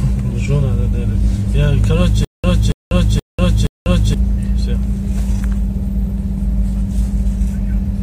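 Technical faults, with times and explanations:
2.25 to 4.14 s, stutter with silent gaps: the same short burst of about 281 ms plays four times, each followed by roughly 193 ms of dead digital silence, so it pulses at a steady beat of about 474 ms. That even stop-start pattern is what you get when playback likely stalls and, at each retry, replays the last fragment it held before running dry. Whatever audio belonged in that stretch never comes through.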